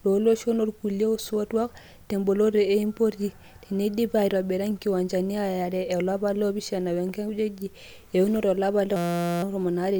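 From 8.96 to 9.43 s the speech gives way to a system hang loop. The system or audio driver stalled while the sound hardware kept replaying one tiny stretch of its ring buffer, a 5.8 ms slice that fits a 256-sample buffer, about 80 times over. Because the slice is so short, it sounds like a steady 172 Hz buzz. The waveform shows one identical cycle tiling the span, and the spectrogram shows rigid horizontal lines at multiples of 172 Hz.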